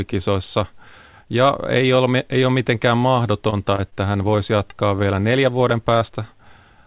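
Just after "ole ei ole mitenkään", at 3.50 to 3.54 s, short concealed packet loss: about 20 ms never arrived in time, so the receiver extended the preceding sound and blended back, leaving a brief smear. At 3.76 to 3.80 s a short stall from a late packet holds the current sound for 20 ms until the data arrives, with nothing lost, only a slightly prolonged sound. Another concealed loss at 3.90 to 3.94 s replaces 20 ms with synthesized continuation. From 4.36 to 4.76 s a jitter buffer slow-down repeats pitch periods to rebuild its reserve, adding 44 ms and running at 91% speed with unchanged pitch, so the speech sounds drawn out. Inside that stretch, at 4.70 to 4.74 s, a further concealed loss of 20 ms is filled with 11 ms of continuation. A last concealed loss at 5.99 to 6.03 s again smears a 20 ms gap. Throughout, the band stops at 4 kHz, consistent with G.711 mu-law telephone coding.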